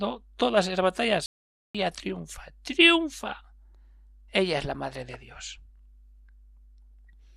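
A playback stall at 1.26 s, just after "todas esas", cuts the speech off mid-flow and leaves silence for 0.49 s, until 1.75 s. The player likely ran out of data or had its thread blocked, so output halted until it recovered.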